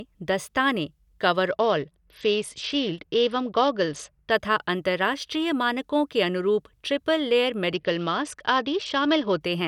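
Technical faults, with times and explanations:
1.50–4.31 s and 7.74–9.41 s, Bluetooth SBC bit pool drop: the treble dulls and gritty noise rises until recovery, the first time just before "तथा अंतरराष्ट्रीय मानकों के". Upper sub-bands lose their bits, consistent with the bit pool falling from 31 to about 9 (roughly 72 kbps).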